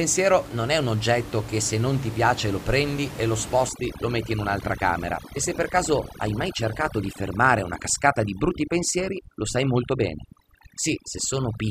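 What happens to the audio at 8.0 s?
Overdone noise removal runs from 3.69 s, just after "lo prendi e lo", to the end. The reduction, set too strong, cuts single frequency bands near its noise estimate, quiet speech parts included, so the room noise breaks into twinkling, warbling specks.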